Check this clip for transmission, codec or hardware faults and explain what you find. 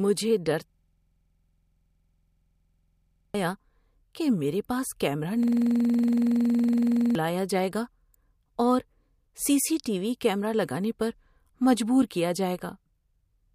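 Two system hang loops interrupt this speech. From 0.70 to 3.34 s, and again from 5.43 to 7.15 s (after "کہ میرے پاس کیمرا", before "جائے گا"), a rattling stutter repeats at 21.5 Hz. The driver froze while the hardware kept replaying one 46.44 ms buffer, consistent with 2048 samples, dropping about 3 s and 1.5 s of audio respectively.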